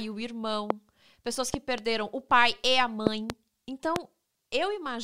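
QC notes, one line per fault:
0.70–0.73 s: loud pop. A single sharp pop sits on top of the speech, which carries on underneath. It peaks roughly 20 dB above the signal. A likely cause is a sudden voltage pulse, such as static or a switch.
1.54–1.80 s: loud pop. Two pops arrive in quick succession, about 15 dB above the signal, just before "o pai e a". This is likely a voltage step that the following circuits shaped into a double thump.
3.07–3.32 s: loud pop. A pair of pops follows "o pai e a". They are the strongest in the clip, roughly 25 dB above the signal. The likely cause is again an electrical glitch.
3.96–3.98 s: loud pop. A single brief pop sits about 20 dB above the signal. It is likely another voltage pulse added to the line.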